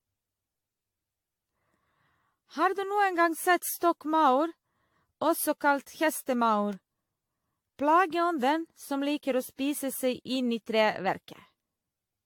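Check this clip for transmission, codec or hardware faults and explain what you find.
One fault runs through the clip from start to finish, and it most likely comes from repeated lossy encoding.

Generation loss, throughout: the speech was likely decoded and re-encoded around ten times with AAC-LC, at settings consistent with 96 kbit/s. Each pass quantises on a shifted frame grid, so noise and spectral gaps accumulate. The result sounds swirly, smeared and hollow, with blurred consonant attacks, and there is no content above 18.7 kHz.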